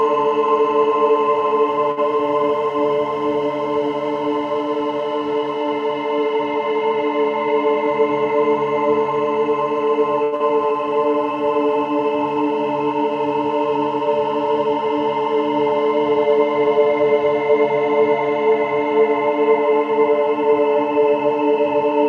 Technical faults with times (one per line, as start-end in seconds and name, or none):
1.91-1.99 short stall from a late packet
7.55-8.35 jitter buffer speed-up
10.23-10.34 short stall from a late packet
10.36-10.42 skip ahead
10.44-11.00 jitter buffer slow-down
16.67-17.92 jitter buffer speed-up